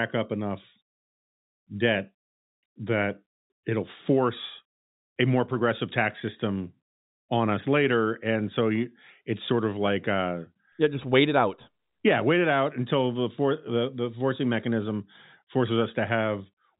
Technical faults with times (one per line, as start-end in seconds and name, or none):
none